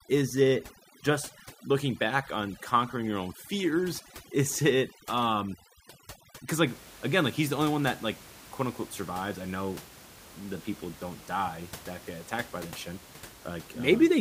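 From the start to 6.67 s, the gaps between words fall to near silence speckled with twinkling artefacts, until "again like he's the". This is overdone noise removal: the suppressor cut bands close to its noise estimate too hard, taking quiet speech detail along with the room noise, which sits about 20 dB below the speech.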